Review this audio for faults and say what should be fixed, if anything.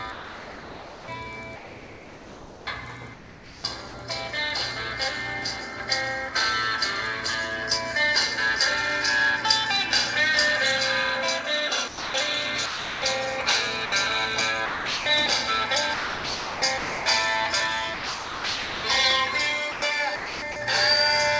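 Sound chopped by the voice detector at 0.12–3.94 s, 15.94–17.06 s and 19.72–20.56 s: the sound is cut by repeated holes filled with comfort noise, likely from the sender's detector toggling repeatedly. Lowering the detector's sensitivity threshold or adding hangover time would prevent this.

Sound dropped by the voice detector at 11.88–12.14 s, 12.66–13.02 s, 13.86 s, 14.66–15.06 s and 17.94–18.84 s: quiet passages give way to steady noise, likely because the detector classed them as background. Longer hangover, or disabling the voice detector for this source, would prevent it.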